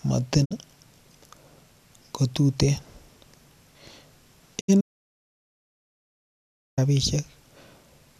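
Speech, with two digital broadcast dropouts at 0.44 to 0.53 s and 4.59 to 4.70 s. Each time the receiver fades out over 20 ms and mutes for 48 ms and then 72 ms, which fits two and then three corrupted frames. An audio dropout to silence follows from 4.81 to 6.78 s. For nearly 2 s there is complete silence with no room tone, likely from a lost input link while recording continued.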